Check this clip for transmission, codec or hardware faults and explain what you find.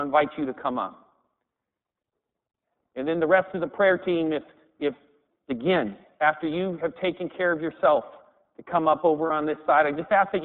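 Two problems are present: the whole recording passed through the iLBC codec, and two packets were dropped along the way.

The iLBC codec runs for the full length. This low-rate narrowband VoIP coder squeezes each frame's excitation independently, and the damage fits its 30 ms mode at about 13.3 kbps. The line passes only 200 Hz to 3.6 kHz, so the speech loses its low body and all of its upper brightness. The coding damage is plainly audible as a rough, slightly synthetic grain over every syllable.

Lost iLBC frames occur at 2.73 to 2.76 s and 9.26 to 9.31 s. Each gap lasts about 30 ms, which points to a single missing packet. With no data arriving, the decoder filled the hole by repeating the last pitch cycle blended with noise. Each gap is heard as a brief held, faintly buzzy vowel. Because every iLBC frame decodes on its own, the voice snaps back to normal almost immediately afterwards.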